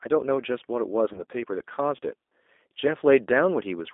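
From start to end the speech carries G.729 codec damage, and it is plainly audible. The line passes only about 250 Hz to 3.6 kHz, so the sound is thin and boxed in. The codec rebuilds each frame from a vocal tract filter, a pitch estimate and a few sparse pulses, which fits an 8 kbit/s G.729A stream. The result is a rough, faintly synthetic texture. On a spectrogram, energy stops sharply at 3.6 kHz and the harmonics look smeared and grainy.

At 1.13 s a VoIP packet loss concealed by the speech codec begins. Roughly 20 ms of audio is missing, which fits a single lost packet. The decoder fills the gap by repeating its last pitch and filter at falling gain, so the sound briefly stretches into a buzzy tone or a coloured noise that fades. Because each frame builds on the one before, the sound stays weak or distorted until about 1.22 s. On a waveform this shows as a short stretch with shrinking amplitude.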